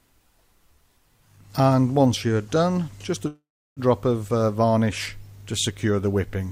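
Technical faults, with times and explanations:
3.27 to 3.80 s, call audio freeze: the sound stalls into a fading buzz, then about 330 ms of silence, likely late packets draining the jitter buffer. Nothing's lost, just pushed back roughly half a second.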